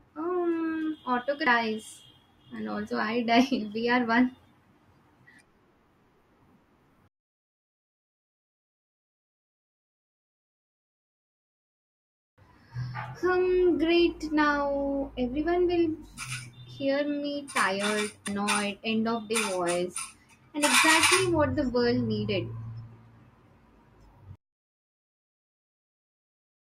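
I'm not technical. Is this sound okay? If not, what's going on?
No, there are two small hiccups from compressed frames skipped. At 1.47 s the speech jumps ahead by roughly a third of a second, and at 18.28 s, just before "end of the", by about a tenth. Chunks of the compressed file were lost or rejected, so the audio jumps past them.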